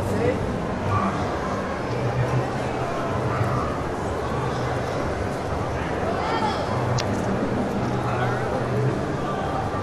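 At 6.96 to 7.01 s, roughly 44 ms of damaged data in the compressed stream produces a brief glitch. Corrupted bytes left the decoder unable to read those frames correctly, so it lost sync and resumed at the next valid frame header.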